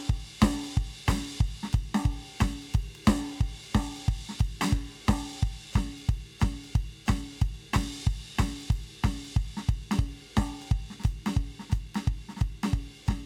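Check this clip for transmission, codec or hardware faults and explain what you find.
I hear no faults anywhere in this music.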